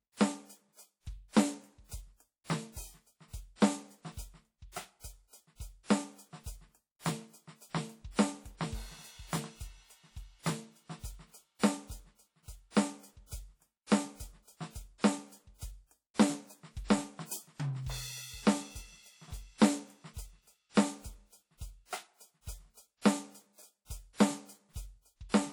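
WMA compression runs throughout the music, from start to finish, and is plainly audible. The sound rings and turns washy, with a hiss that rises and falls with the music, the signature of a transform codec spreading its quantisation noise over tens of milliseconds and dropping weaker detail. Nothing remains above 19.9 kHz. The damage fits a low bitrate of around 48 kbps, most likely from an early WMA encoder.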